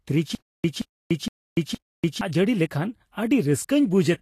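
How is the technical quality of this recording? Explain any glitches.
The recording has two clear problems: grainy, band-limited coding damage across the whole clip and a repeating stutter near the start.

Vorbis compression, throughout: nothing reaches above 14.2 kHz, and the treble is coarsely quantised into hiss-like grain, plainly audible, with smeared consonant attacks. This is likely Vorbis at a low rate, near 29 kbps. A simple low-pass filter would dull the sound without adding this grain.

Stutter with silent gaps, 0.35 to 2.21 s: a 175 ms burst repeats four times, each followed by 291 ms of silence, a steady 465 ms cycle. This is likely a stalled player or stream replaying its last fragment at each retry, so the speech in between is lost. A plain dropout would leave silent gaps without the repeated burst.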